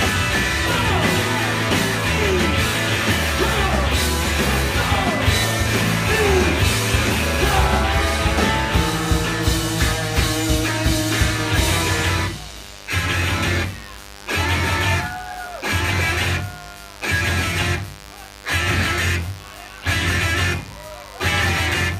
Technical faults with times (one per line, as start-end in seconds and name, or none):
0.00-21.99 mains buzz